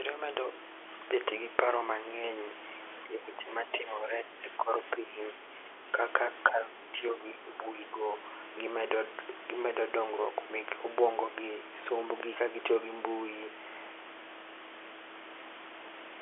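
Speech suppressed in double talk affects 3.04 to 5.98 s and again 6.5 to 8.06 s. The talker's level sinks by around 10 dB in the first stretch and by a shallower, roughly 5 dB in the second, pumping down and back up. The likely cause is the far side talking at the same moment, so the echo canceller mistook this speech for loudspeaker echo and attenuated it, all within the 300 to 3400 Hz telephone band.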